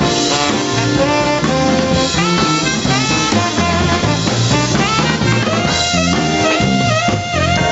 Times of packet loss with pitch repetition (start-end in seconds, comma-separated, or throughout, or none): none